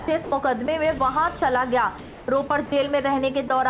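From 0.00 to 0.32 s and again from 2.00 to 2.72 s, the sound is chopped by the voice detector, which likely toggled transmission repeatedly. About 160 ms and 360 ms become comfort noise. Single brief gaps at 0.66–0.68, 0.98–1.00, 1.40–1.42 and 3.48–3.50 s are likely sound dropped by the voice detector. Each 10–20 ms slice gives way to one steady patch of noise before the sound returns, all within a band stopping near 4 kHz.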